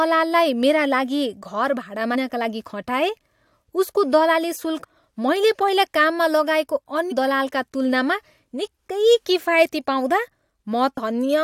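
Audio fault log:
2.14, 4.83, 7.11 and 10.96 s: compressed frames skipped. At each point the speech jumps ahead by about 200, 300, 150 and 200 ms, roughly seven to ten of the 23.2 ms frames going missing.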